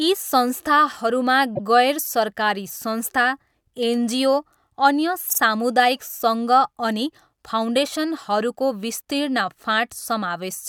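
A brief stutter at 1.55 to 1.62 s, just before "गैर सरकारी", replays a 72 ms slice once. At 5.29 to 5.39 s a 48 ms slice plays twice more, adding 96 ms. Both are repeated frames: compressed blocks were delivered again, so the decoder replayed them.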